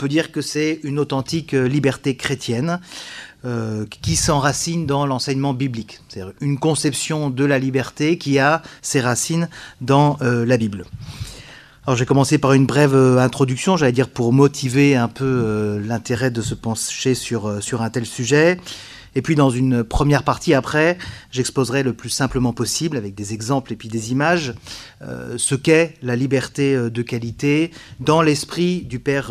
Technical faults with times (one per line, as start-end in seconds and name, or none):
none